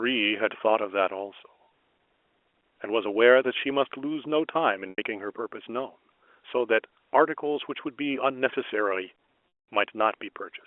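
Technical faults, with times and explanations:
4.90–4.98 s, packet loss with pitch repetition: a brief buzzy, held tone fading out as the receiver loops the last pitch period to cover 80 ms of missing audio.
9.48–9.68 s, packet loss with pitch repetition: a buzz fades to silence, then sound cross-fades back; 200 ms was lost, outlasting the roughly 50 ms repeated-period fade.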